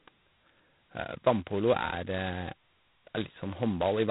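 From start to end the speech carries G.726 ADPCM damage, and heavily. Each sample is coded as a coarse step from a running prediction, so with so few bits the quantisation error rides along as a harsh, rasping hiss that swells and fades with the speech level, which points to the 16 kbit/s mode. Nothing above 3.9 kHz survives. Unlike steady background noise, the rasp vanishes in pauses, and unlike perceptual codecs it brings no warbling or swirling.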